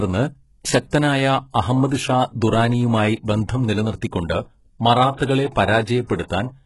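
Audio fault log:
Throughout: HE-AAC compression. The speech has heavy codec damage. The treble sounds synthetic, and s sounds come out gritty and metallic or lispy. This is likely HE-AAC at a very low bitrate, which fits about 12 kbps. Only the lower band is truly coded, and the highs are copied upward from it, so their harmonics don't align. A spectrogram shows repeated, smeared upper-band patches and a hard ceiling at 11.5 kHz.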